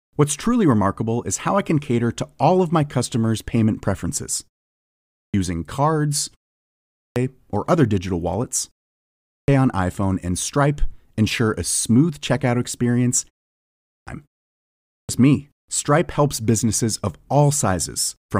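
Speech that loses its opening after short pauses, a clipped start after a pause. It happens five times: at 4.86, 6.69, 8.99, 13.56 and 14.57 s. Each time, about half a second of sound is swallowed, between 0.47 and 0.52 s. Words then begin abruptly out of silence. Every gap before them is short, 0.34 to 0.45 s. The output device has likely gone to sleep in that silence and needs time to wake before it passes sound again.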